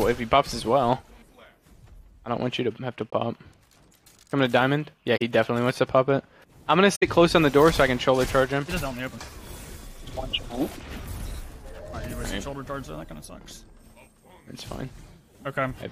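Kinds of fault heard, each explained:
Corrupt frame concealed: damaged AAC frames were replaced by the decoder in brief spans near 3.11, 5.17 and 6.95 s, two, two and three frames long.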